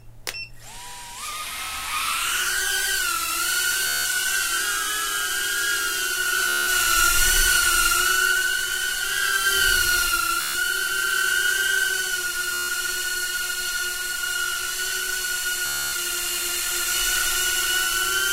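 Bluetooth stutter occurs five times, at 3.87, 6.49, 10.41, 12.54 and 15.66 s. Each time, audio packets arrived late or not at all, and the receiver kept replaying its last short buffer, a slice of roughly 14 ms, so the sound turns into a rapid mechanical buzz. The dropouts last about 0.18, 0.18, 0.14, 0.15 and 0.27 s. The sound then picks up further along, as though it had kept playing underneath.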